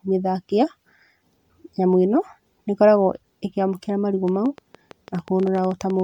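From start to finish the speech sounds swirly, hollow and smeared, with softened attacks and nothing above 19.9 kHz. This is generation loss, likely from the audio being MP3-encoded and decoded around seven times at roughly 98 kbit/s, each pass adding new quantisation noise and spectral gaps.

From 4.28 s, right after "nĩ ĩkoragwo ĩkĩamũkĩra marigũ", until 6.01 s, about twenty similar clicks tick unevenly over the sound, roughly as loud as the speech, at about 10 per second. This train of clicks is likely interference or a faulty connection injecting repeated pulses.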